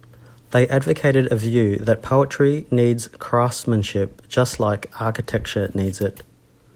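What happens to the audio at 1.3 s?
Nothing goes wrong at 1.3 s: the speech carries straight through that moment without a dropout, click or other fault.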